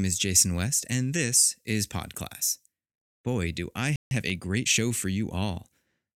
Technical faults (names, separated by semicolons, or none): playback stall; time-compressed catch-up